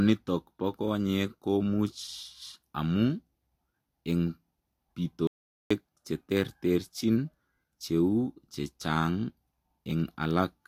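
At 5.27 s the speech cuts off abruptly and the audio drops out to silence until 5.71 s, a gap of about 430 ms. There is no room tone or noise floor, only silence, so whatever was said there is simply gone. The likely cause is a momentary loss of the input signal while recording continued. On a waveform this appears as a flat line, and a spectrogram shows a dark vertical band with hard edges.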